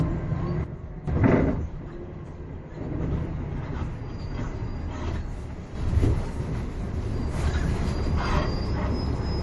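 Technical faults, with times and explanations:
Throughout, transcoding between lossy codecs: the sound is dull, with nothing above 11.4 kHz. The artefacts of two codecs are heard together. The likely cause is a low-bitrate Vorbis encode, consistent with about 63 kbit/s, re-encoded as MP3 at about 48 kbit/s. The MP3 encoder wastes its scarce bits reproducing the Vorbis damage and adds its own, while the lowest cut-off in the chain survives.
0.64–1.08 s and 5.75 s to the end, sudden gain jump: the level drops abruptly by about 12 dB at 0.64 s and snaps back at 1.08 s. At 5.75 s it leaps up by about 6 dB and stays there to the end. The sound and its background noise move together, with no fade, and each step can produce a click. This is likely a digital gain change applied from one sample to the next without a ramp.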